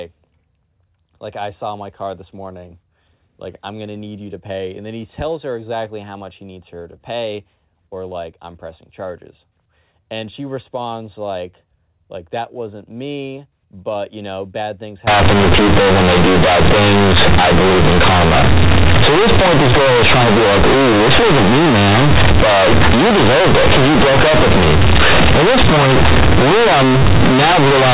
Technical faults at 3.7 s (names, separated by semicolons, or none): none